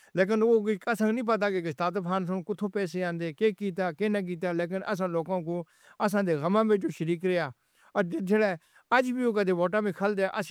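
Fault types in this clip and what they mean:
The speech signal shows no technical faults of any kind.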